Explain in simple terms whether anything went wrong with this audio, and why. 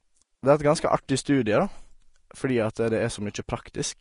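Something did go wrong, and it runs through the whole recording. The speech has a hissy, grainy edge, with crisp consonant onsets smeared, and there is no content at all above about 10.6 kHz. That combination is most likely Vorbis compression set to a low quality level. The encoder discards the very top of the spectrum and stores the remaining treble so coarsely that fine detail is replaced by a noise-like texture.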